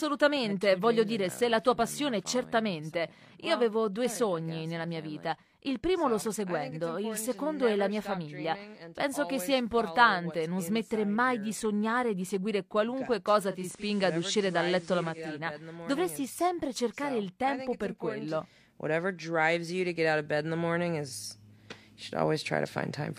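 At 13.46 s the digital radio blends to analogue. The receiver loses its digital stream and cross-fades to the station's FM broadcast over roughly 460 ms, then comes back at 15.42 s. While it's on FM, a faint hiss sits well below the sound and the level shifts by about 2 dB, so the stretch sounds noisier than what's around it.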